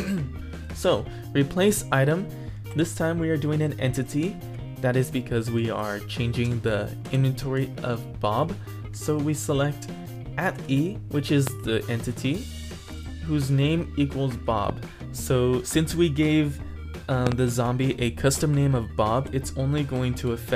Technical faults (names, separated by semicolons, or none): loud pop